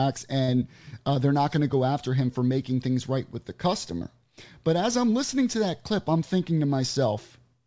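Around 0.44 to 0.50 s, just before "uh they're not going", and again at 3.98 to 4.03 s, right after "things right with the", there's short concealed packet loss: about 40 ms of speech arrived too late and the receiver faked it by stretching the preceding sound, giving a quick smeared wobble before it rejoins the real audio.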